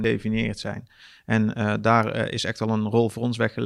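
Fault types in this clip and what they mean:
Damaged data in a compressed stream: a corrupted bit of the coded file throws the decoder off sync, so right at the start you get a tiny blip before it recovers.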